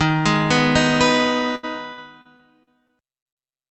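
From about 1.55 to 3.38 s there's repeated packet loss, giving that robotic sound: roughly eight short dropouts, the longest about 76 ms, each patched by stretching the previous sound. Around a sixth of the stretch is filled-in material, so it turns choppy.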